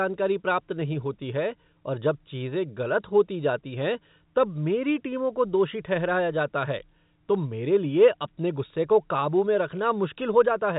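No technical faults are audible anywhere in this speech.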